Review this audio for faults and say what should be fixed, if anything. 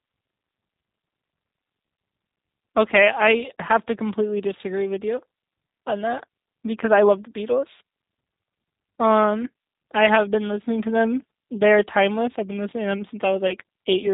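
The speech carries G.729 codec damage from start to finish, and it is plainly audible: a rough, slightly synthetic texture, which fits an 8 kbit/s low-bitrate voice codec. The coder rebuilds each 10 ms frame from a vocal tract model, pitch prediction and a few pulses, so fine detail is lost. A spectrogram shows a hard ceiling at 3.8 kHz with nothing above it. To prevent this, capture or route the call through a wideband codec such as G.722 or Opus.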